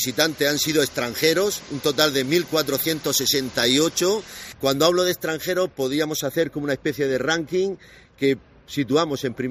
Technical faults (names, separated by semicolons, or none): pre-emphasis left on